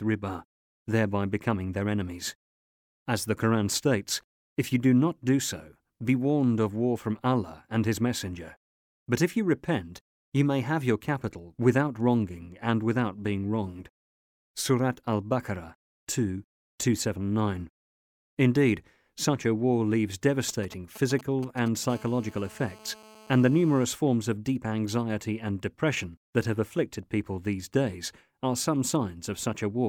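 From 20.49 to 21.92 s a galloping dit-dit-dit of short rasping buzzes cuts through the speech, sitting roughly 15 dB below it. These are GSM signalling bursts: a nearby 2G phone sending brief groups of radio pulses, which the audio circuitry rectifies into audible clicks at the 217 Hz burst rate.

At 21.92 s the pattern turns into a continuous hard, raspy 217 Hz buzz full of harmonics, about 25 dB below the speech, lasting until 23.86 s. This is GSM phone buzz: the phone has settled into a call and transmits steadily, so the rectified bursts form an unbroken tone unrelated to the speech.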